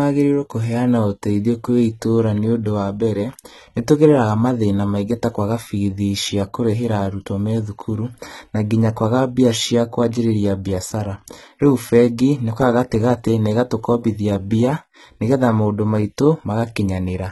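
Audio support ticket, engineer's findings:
HE-AAC compression, throughout the speech. Treble gritty and synthetic, s sounds lispy and metallic, no content above 11.8 kHz. Heavy damage. Likely cause: spectral band replication, with upper band copied from lower bands under coarse envelope, so harmonics misalign at crossover. Degree of damage fits a very low bitrate, around 16 kbps.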